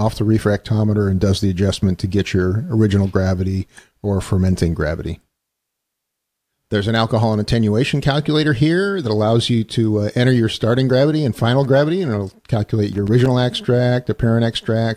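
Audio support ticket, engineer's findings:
Irregular burst of crackle and scratching, 12.93 to 13.26 s (about 0.34 s). Loose connector crackle: worn or dirty contact making and breaking, chopping the signal. Waveform shows ragged dropouts and spikes; spectrogram shows scattered broadband vertical streaks.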